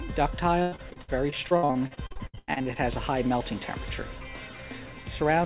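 From 0.62 to 2.80 s, repeated packet loss makes the sound robotic. About 25 short dropouts follow one another, the longest near 98 ms. Each hole is patched by stretching the last sound, so nearly 40% is filler. It sounds choppy, within the call path's 4 kHz band limit.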